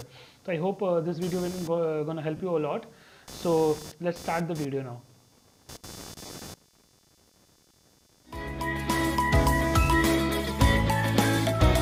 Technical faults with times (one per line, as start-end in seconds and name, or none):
0.00-11.82 computer activity noise
2.37-2.40 lost LE Audio frames
6.26-6.29 lost LE Audio frames